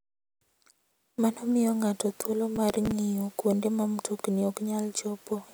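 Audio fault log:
2.56–2.91 s, processor overload crackle: between "miyo ng'ato thuolo" and "ng'iyo kuonde ma mtokni" the speech takes on a gritty, tearing crackle for about a third of a second. The processor missed its deadlines on a run of roughly seven buffers of about 5 ms each, and each slot replayed stale audio with hard edges.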